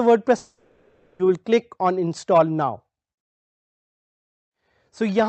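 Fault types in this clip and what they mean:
Long network dropout: Packets likely stopped arriving from 0.37 to 1.21 s, so 820 ms of the original audio never reached the receiver. Instead of leaving a hole, the receiver filled the whole gap by stretching the last sound it had into a buzzy, hissy continuation that fades away, kept within the 8 kHz band of the Opus call path. Real sound resumes at 1.21 s, with the lost stretch simply gone.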